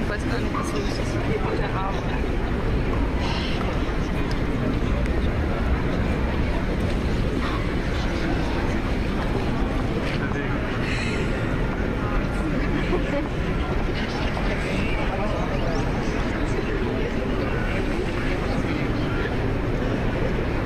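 Whole compressed frames were skipped during decoding, either missing from the file or rejected as damaged, so playback jumps ahead at 3.67, 5.25, 7.41, 9.06, 10.2, 15.14 to 15.16, 16.30 and 19.09 s. Each jump drops roughly a few tenths of a second of sound, from about 150 ms up to about 400 ms, with skip lengths that fit whole frames of about 23 ms. Each compressed frames skipped join is audible as a sudden splice, a brief blip or click where the sound lurches forward.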